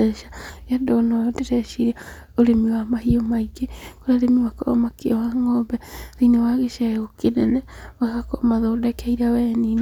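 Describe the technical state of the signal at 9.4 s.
At 9.4 s the speech signal is intact, with no audible technical fault at that moment.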